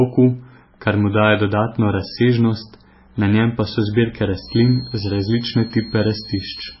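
Speech, with heavy MP3 compression damage throughout: the audio has a watery, swirling quality as weak frequency components drop in and out between frames, and nothing remains above 5.6 kHz. This points to a very low bitrate, around 17 kbps, where the encoder likely ran short of bits and cut the treble. From 4.40 s to the end, a feedback whistle sits at a single pitch of 4.3 kHz, roughly 20 dB below the speech. This is likely a loudspeaker-to-microphone loop held just short of full feedback.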